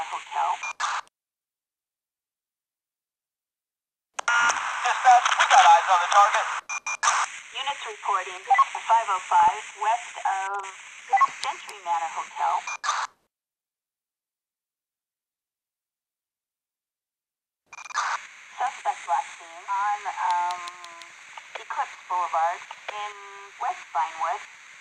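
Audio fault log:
7.53–7.71 s and 9.19–9.63 s, DAB burbling: residual bit errors corrupt MP2 scale factors and samples, so single sub-bands jump in level frame by frame, giving short blips of noise. On a spectrogram, blocky band-limited flashes appear at a frame-length grid, consistent with a bit error rate of roughly 0.2–0.3%.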